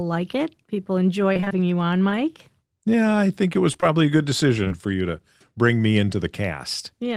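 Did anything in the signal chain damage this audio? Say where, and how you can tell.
Yes, the damage is in the network stage. Repeated packet loss (robotic sound) runs from 1.33 to 1.52 s, after "like it people" and before "you on". Five gaps, none over 22 ms, leave nearly half that stretch patched by extended sound. The result is choppy and robotic.

Short concealed packet loss follows, also from the network. Three back-to-back 20 ms holes fall at 3.72–3.84 s, after "I think it was" and before "a good". Two more hit 4.64–4.72 s. The receiver stretched the preceding sound to fill them, leaving brief smears.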